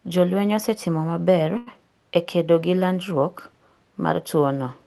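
A short stall from a late packet occurs from 1.57 to 1.79 s. A packet arrived late, the jitter buffer ran dry, and the receiver stretched about 92 ms of the preceding speech before resuming where it left off. Nothing is lost, but the sound hangs slightly too long with a faint buzz or dip, over a call codec band that tops out near 12 kHz.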